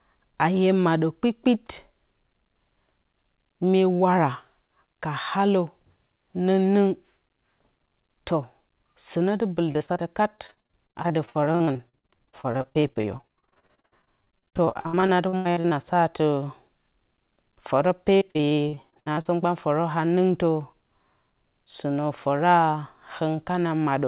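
Choppy, robotic speech with pieces missing comes in bursts at 9.72–10.01 s, 10.37–15.73 s and 18.17–19.27 s. This is repeated packet loss: holes of up to about 83 ms are bridged by extending the preceding sound, over the narrowband, 4 kHz-limited call audio.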